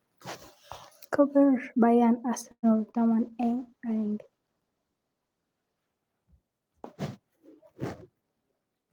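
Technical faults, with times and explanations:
2.51–2.79 s, call audio freeze: the last sound stretches into a fading buzz, then about 70 ms of silence, before continuing intact. This is likely delayed packets draining the jitter buffer.
2.92–2.96 s, short concealed packet loss: about 20 ms never arrived and was patched by extending the preceding sound, heard as a brief smear.
3.20–5.88 s, call bitrate drop: the sound turns coarser and duller, consistent with the encoder being pushed from around 40 kbps down to about 18 kbps.
8.08–8.91 s, jitter buffer speed-up: pitch periods are trimmed repeatedly to shed about a tenth of a second of excess delay, so the audio runs roughly 11% fast at unchanged pitch.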